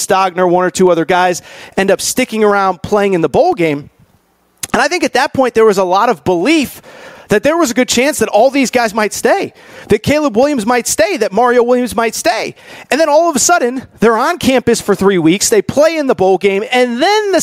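Gain pumping runs through the whole recording. The level swing is large, around 20 dB. Loud and quiet passages sit close together, so the speech sounds squashed. The likely cause is input gain set far too high for the microphone, with a fast limiter or compressor clamping down each time the speech peaks.

At 3.52 s a DC step occurs. The waveform's zero line jumps to a new offset. That jump is heard as a low thump, while the speech carries on unchanged. The offset lasts until 10.43 s. The thump comes from the baseline moving, not from anything in the sound itself.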